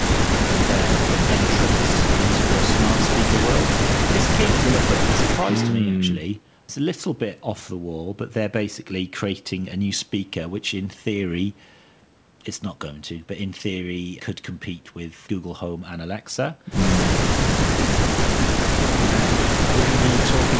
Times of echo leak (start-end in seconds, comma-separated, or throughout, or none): 0.00-5.75